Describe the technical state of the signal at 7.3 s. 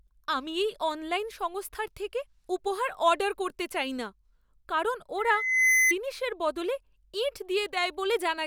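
Nothing is wrong with the signal at 7.3 s; the speech there is intact, with no dropout, click, distortion or other fault to be heard.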